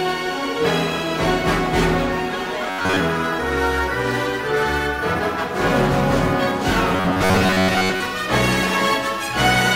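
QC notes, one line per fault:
2.70–3.00 s and 6.96–8.06 s, robotic sound from repeated short buffers: a rigid metallic buzz locked at 93.8 Hz, likely from an 11 ms chunk repeated over most of the audio. Its steady pitch sets it apart from clicky dropouts.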